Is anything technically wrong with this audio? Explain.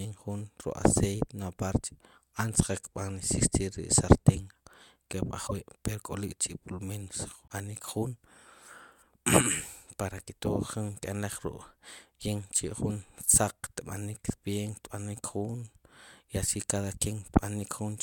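Yes, there are two kinds of fault.

Channel delay (comb filtering) runs from 2.51 to 4.36 s. One channel lags the other by roughly a single sample, about 0.02 ms. When the two are summed to mono, content common to both cancels at evenly spaced frequencies. With so short an offset, the first notch lands at roughly 20 kHz. The section therefore sounds slightly dull, with the very top of the spectrum thinned rather than audibly hollow.

The second fault is a broken MP3 bit reservoir, heard at 5.46 to 5.51 s and at 7.48 to 7.51 s. Each is a brief glitch, about 50 ms and 35 ms long, in which the audio skips ahead with a short disturbance. The likely cause is missing 24 ms MP3 frames: the frame after each gap reaches back into the reservoir for its data and decodes bytes from the wrong frame.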